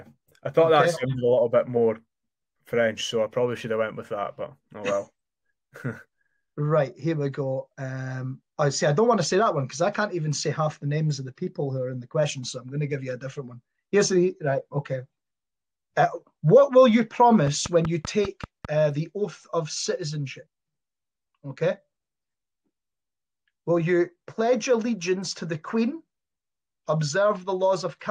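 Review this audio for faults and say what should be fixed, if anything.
A train of clicks runs from 17.47 to 18.66 s: about seven near-identical pulses at a steady 5.1 per second, peaking roughly 10 dB above the sound. The likely cause is interference from nearby equipment or a faltering interface. Prevent it by shielding and rerouting cables and securing interface connections.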